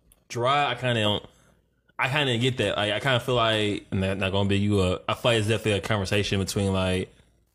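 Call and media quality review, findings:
No audible faults found.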